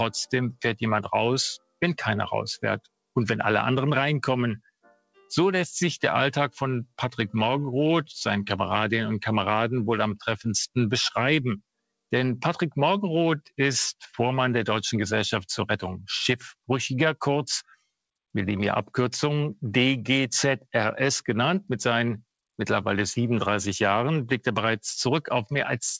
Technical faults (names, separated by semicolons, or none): sound cut by the noise suppressor